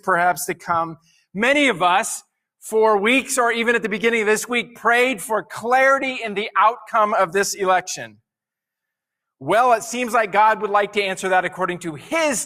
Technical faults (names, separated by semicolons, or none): none